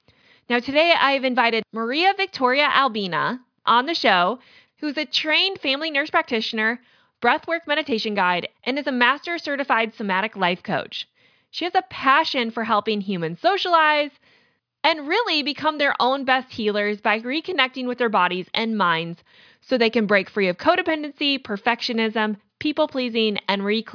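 No technical faults can be heard anywhere in the recording. Nothing in the signal chain stands out as having gone wrong at any point.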